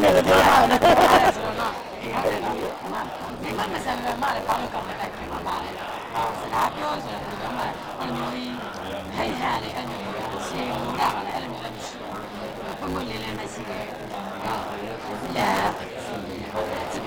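Buffer tearing runs throughout: writer and reader overlap, so about half of each 10 ms period replays audio from a lap earlier, a steady 100 Hz rattle heard only under signal, unlike underrun gaps.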